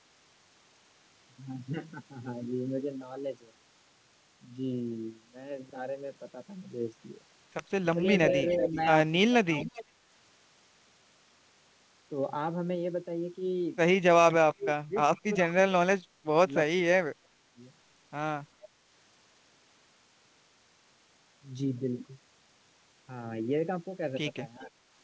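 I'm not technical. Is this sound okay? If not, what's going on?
No. Around 7.93–8.01, 8.74–9.59, 14.44–14.95, 15.71–17.59 and 24.59–24.71 s the speech suddenly dips or cuts out in pieces, most deeply at 14 to 17 s. This is likely speech suppressed in double talk: both ends talked at once, and the call's echo control turned this voice down too.

The echo leak is different: instead of speech vanishing, a faint extra copy of it appears, arriving about 0.39 s late, at 8.5–8.67, 9.62–9.85 and 15.17–15.21 s. A loudspeaker at one end likely let sound slip back into its microphone.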